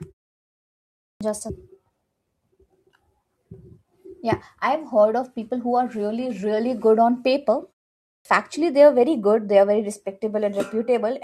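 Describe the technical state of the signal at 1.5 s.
At 1.49 to 1.51 s, right after "just a", there is a skip ahead: about a second of speech was dropped while later audio was already queued, so playback jumps forward with no gap. The two sides are butted almost directly together, leaving an abrupt splice.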